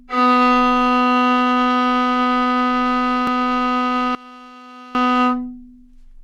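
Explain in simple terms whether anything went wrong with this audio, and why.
Two things go wrong. At 3.27 s there is a tiny skip where the sound jumps forward. This is an overlap between stream segments: two consecutive pieces of the stream claimed the same moment, and the player discarded a few milliseconds of real sound, so the waveform jumps. The position fits a stream cut into roughly 4-second segments.

From 4.15 to 4.95 s the sound suddenly drops to a faint remnant, then returns. The likely cause is one channel inverted: one stereo side is flipped in polarity, so when both sides combine, everything they share cancels and only their small differences remain.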